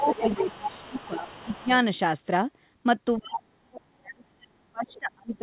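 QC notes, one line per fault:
0.00–1.66 s, other side's voice leaking through: a second voice sits under the talker at roughly 15 dB below, band-limited to about 4 kHz like the G.711 call path. The likely cause is a loudspeaker echo that the canceller failed to fully subtract.
0.00–1.70 s, speech suppressed in double talk: the talker's level dips by up to about 15 dB across most of this span while the leaked voice runs. This is likely the echo canceller ducking both signals because it could not separate near talker from echo.
3.16–3.22, 3.38–3.42, 3.73–3.78 and 4.86–4.99 s, other side's voice leaking through: short scraps of a second voice, ranging from roughly 15 dB to 30 dB below the talker. These are likely residual echo fragments slipping past the canceller in brief bursts.
3.17 s to the end, speech suppressed in double talk: the talker is pushed down hard, by as much as about 40 dB, while the far side is active. 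The likely cause is the canceller clamping everything during simultaneous talk.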